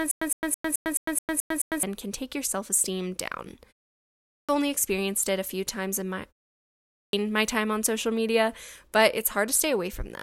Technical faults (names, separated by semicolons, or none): stutter with silent gaps; clipped start after a pause